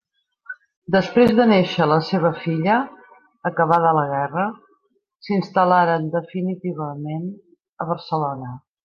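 Speech recording, with no technical faults to point to anywhere in it. Nothing needs a time or a cause.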